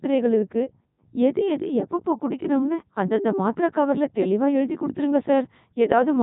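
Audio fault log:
throughout: Codec 2 vocoder. The speech is resynthesised from sine waves using only pitch, voicing, energy and a coarse spectral envelope, so the original waveform is lost and the voice sounds robotic and buzzy. The heavy damage and nothing above 3.8 kHz fit the 3.2 kbit/s mode.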